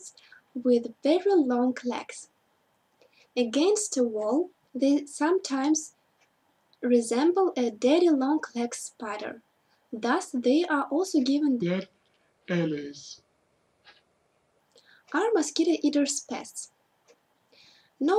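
From 11.6 to 14.6 s the sound suddenly drags and drops deep, about seven semitones lower, then snaps back. This is a section at the wrong speed, running at 0.706 times normal, likely from playback or editing against a mismatched clock, so pitch and tempo fall together.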